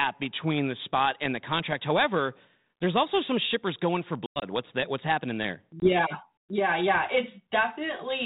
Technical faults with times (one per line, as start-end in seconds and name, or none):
4.26-4.44 packet loss on an ADPCM call
5.80-5.90 packet loss on an ADPCM call